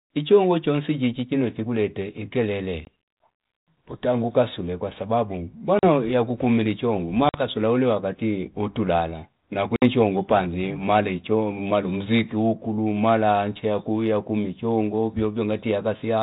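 Packet loss on an ADPCM call breaks this speech four times: at 2.85 s (20 ms), at 5.79 s after "utenge ukasule kwasababu" (40 ms), at 7.29 s just before "uliwakati utuilala" (50 ms), and at 9.76 s right after "uliwakati utuilala" (60 ms). Each gap is a hard-edged silence of a few packets. Afterwards the decoder's adaptive predictor and step size no longer match the sender's, so the resumed speech returns with brief, slight distortion, settling within some tens of milliseconds.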